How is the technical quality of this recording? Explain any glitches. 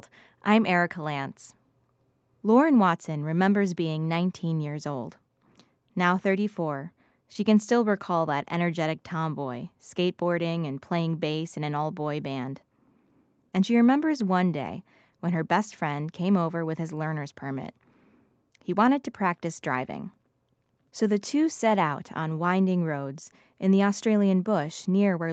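No glitches or dropouts can be heard anywhere here.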